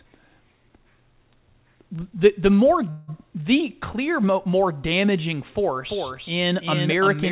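At 2.9 s, just after "the the more", a call audio freeze occurs: packets were likely held up in transit and the jitter buffer ran dry. The receiver fills about 0.18 s with a fading continuation of the last sound, then resumes at "the clear more damaging" with nothing lost.

From 5.90 s to the end, right after "the clear more damaging", a doubled audio track appears, likely a second capture through a slower path. A full-band copy about 5 dB quieter trails by around 300 ms, with no room colour, and starts abruptly. Through both faults the band stops at 4 kHz, which fits G.711 A-law at 64 kbps.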